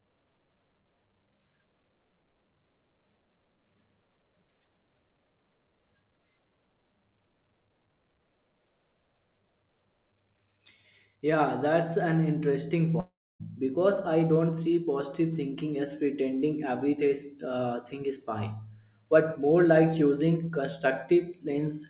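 At 13.0 s, after "that's an interesting", the sound smears into a fading buzz, then drops to near-silence for about 0.28 s before resuming at 13.42 s with "because I don't see". A long network dropout is the likely cause, with about 0.4 s of audio lost outright.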